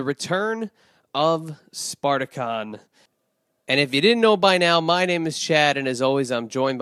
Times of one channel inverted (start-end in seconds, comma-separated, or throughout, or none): none